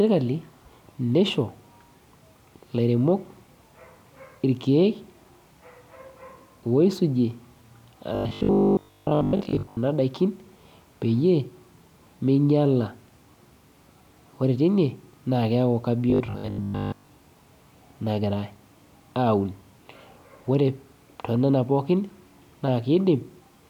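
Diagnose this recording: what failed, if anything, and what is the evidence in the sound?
Robotic sound from repeated short buffers appears at 8.15 to 9.77 s and 16.10 to 17.08 s, where the speech turns into a rigid metallic buzz at 50 Hz. The likely cause is a driver or buffer underrun, with a short segment replayed over most of the incoming audio. The 50 Hz buzz fits a 20 ms buffer.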